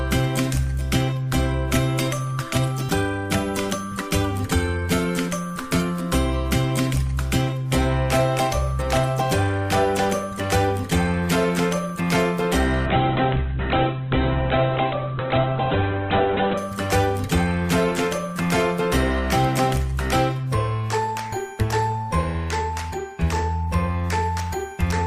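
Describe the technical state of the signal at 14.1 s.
A call bitrate drop spans 12.87–16.65 s. The bit-starved encoder codes coarsely and cuts off above 4 kHz, giving muffled, rough sound and a spectrogram blank above 4 kHz.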